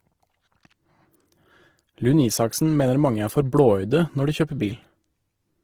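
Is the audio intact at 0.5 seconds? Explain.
No. At 0.5 s the speech carries Opus compression damage that runs through the whole clip, not just this moment. The sound is plainly grainy and rough, with hiss-like texture filling the upper bands while content still reaches about 20.4 kHz. That full bandwidth with noisy band filling points to Opus in its music (CELT) mode at a low rate near 16 kbps, which likely caused it: short of bits, the encoder preserves each band's energy but substitutes folded or noise content for detail.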